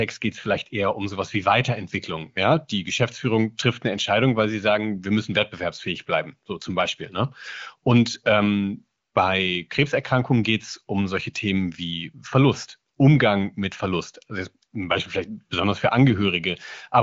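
Nothing stood out on listening to this speech, which carries the band limit of the AMR wideband (HD Voice) path, with nothing above about 7.1 kHz.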